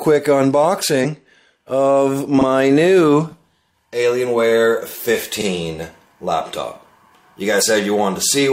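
At 1.00 to 1.06 s there's a brief glitch, then a tiny blip at 3.82 s and another short burst from 7.57 to 7.63 s. All three are damaged data in a compressed stream: some of the data went bad, so the decoder misread those frames, lost its footing and had to hunt for the next valid frame header before playback settled again. The first and last each last only about five hundredths of a second, and the middle one is momentary.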